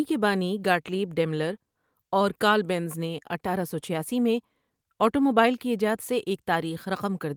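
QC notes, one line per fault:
Nothing to flag here; the speech comes across without any audible problems from the first moment to the last.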